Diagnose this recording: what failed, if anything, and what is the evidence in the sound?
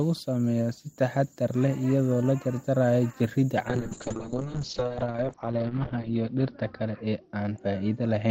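A call bitrate drop at the codec stage. From 3.69 s to the end, the speech turns rough and muffled: the audio bandwidth collapses from 20 kHz to 6 kHz, and the coarser coding fits a fall from about 32 kbps to roughly 11 kbps, held at its lowest for 2.33 s. The bandwidth estimate fell, so the encoder spent far fewer bits and discarded high frequencies. A spectrogram shows a flat ceiling at 6 kHz with smeared, blocky harmonics.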